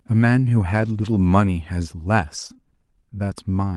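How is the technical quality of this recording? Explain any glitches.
The recording has audible network-loss damage in two forms, both confined to the first and second halves of the speech.

Lost packets rebuilt from error correction occur from 0.77 to 1.15 s and again from 2.37 to 2.51 s. Each lost packet was replaced by a low-bitrate copy carried in the following packet, which the decoder played instead of leaving a gap. About 200 ms of sound is rebuilt in the first stretch and 80 ms in the second, which fits runs of roughly ten and four packets. These passages sound rougher and grainier, and on a spectrogram they show smeared, noisier harmonics with no silent hole in the waveform.

Short concealed packet loss follows almost immediately, between 2.53 and 2.68 s, with a second overlapping event from 2.57 to 2.60 s. Here about 20 ms of audio never arrived in time each time. The decoder extended the preceding sound for 15 ms and 11 ms respectively, then cross-faded back into real audio, adding roughly 10 ms in the first case. 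It is heard as a brief smear or wobble.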